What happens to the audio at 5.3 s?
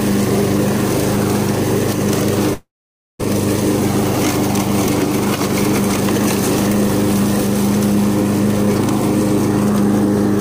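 Nothing goes wrong at 5.3 s; the audio runs through that moment intact, with no dropout, click or other disturbance.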